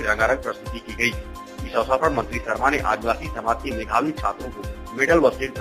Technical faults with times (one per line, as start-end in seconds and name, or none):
none